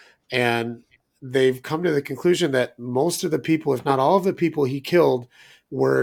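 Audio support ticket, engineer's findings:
No audible defects found across the speech recording; nothing to attribute to capture, transport or playback, and no action needed.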